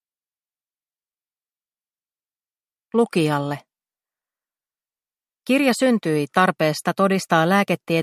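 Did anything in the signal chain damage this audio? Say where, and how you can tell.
No, nothing in the signal chain damaged this audio.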